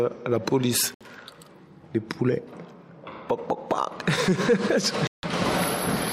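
The audio has two digital broadcast dropouts, from 0.94 to 1.01 s and from 5.07 to 5.24 s, where it cuts or quickly fades to silence for about 64 ms and 160 ms. That fits the receiver muting over two and then five bad frames.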